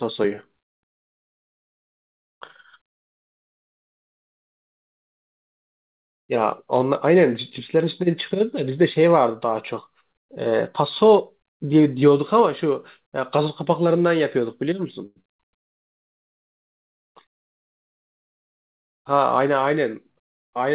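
Speech heard through a call path band-limited to 4 kHz, which points to G.711 mu-law coding, has a cluster of network timing faults. At 15.06 s a short stall from a late packet holds the current sound for about 98 ms until 15.18 s, stretching it with a slight buzz or dip but dropping nothing. Right after, at 15.22 to 15.26 s, a short concealed packet loss replaces about 60 ms of audio with only 18 ms of extrapolated sound, a brief smear that shortens the passage and trims the buffered delay by about 40 ms. The jitter buffer then rebuilds its reserve with a slow-down from 15.28 to 16.29 s, running at 96 % speed by repeating pitch periods to add 46 ms, so sounds drag slightly at unchanged pitch. Later, a jitter buffer speed-up from 17.13 to 19.67 s runs at 104 % speed, cutting roughly a tenth of a second of short pitch-period pieces.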